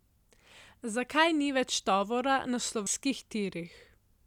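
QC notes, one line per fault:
2.86 s, damaged data in a compressed stream: right after "tovora na" a very short blip, only a few milliseconds long, cuts across the speech. Some bytes in the encoded stream at this point are corrupt, so the decoder cannot read the affected frame correctly, loses synchronisation and scans forward for the next valid frame header. The brief stretch of misdecoded or discarded data is heard as a sharp, unnatural blip rather than as continuous audio.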